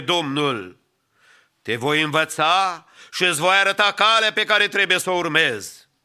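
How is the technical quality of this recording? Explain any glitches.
Nothing in the recording stood out as a technical problem on listening, so there are no glitches to explain.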